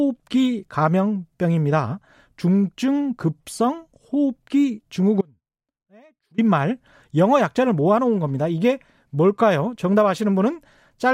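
An audio dropout to a faint residue runs from 5.21 s to 6.38 s, cutting the speech off abruptly for about 1.17 s. The gap is not silent: a faint sound remains, roughly 30 dB below the signal's normal level, before the speech snaps back in mid-flow. The cause is likely a brief loss of the wanted feed while the path downstream stayed live, which is why it sounds like a break rather than a pause or fade.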